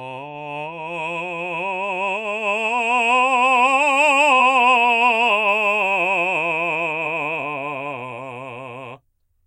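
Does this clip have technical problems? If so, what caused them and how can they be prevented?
Yes. Compressed frames are skipped in this music at 4.39–4.41 s, where roughly two 46.4 ms frames (about 100 ms of audio) go missing, and at 7.04 s, where about one frame is lost. Unlike a dropout, nothing falls silent. The music jumps ahead at each join by the length of the missing frames. Verifying the file with a checksum after every transfer or copy keeps missing or damaged frames from reaching the decoder.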